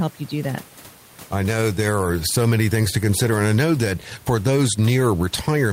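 No technical faults can be heard anywhere in the speech, and the only other sound is the room's own background noise, sitting about 28 dB below the speech.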